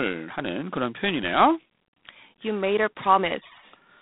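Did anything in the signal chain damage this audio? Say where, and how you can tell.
Yes, at the codec stage: G.726 ADPCM coding damages the speech for its whole length. A harsh, rasping hiss rises and falls with the speech level. Nothing passes above 3.9 kHz, within a telephone band of 150 Hz to 3.7 kHz. That coarseness fits the 24 kbit/s mode, which codes each sample as three bits of error against an adaptive prediction.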